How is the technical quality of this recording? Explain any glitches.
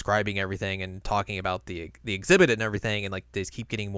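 No glitches or technical faults are audible anywhere in the recording.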